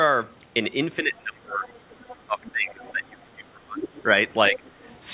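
Speech suppressed in double talk first appears from 1.0 to 1.67 s. The talker's level sinks by roughly 25 dB, likely because an echo canceller, unable to tell the talker apart from loudspeaker echo while both sides spoke, pulled everything down. Right after, from 1.66 to 2.24 s, the other side's voice leaks through faintly, about 25 dB under the speech. This is residual echo the canceller likely failed to remove.

The suppression returns from 2.27 to 3.86 s, again dropping as much as about 25 dB. Inside it, short leaked scraps of the far voice surface at 2.45 to 2.51 s and 2.82 to 2.92 s. A louder leak, only about 15 dB down, follows at 3.86 to 4.01 s. A brief, shallower dip of about 15 dB hits 4.49 to 4.63 s, and a last, very faint leak runs from 4.67 to 4.96 s. Throughout, the audio has no content above 4 kHz, which fits a narrowband call codec such as G.711.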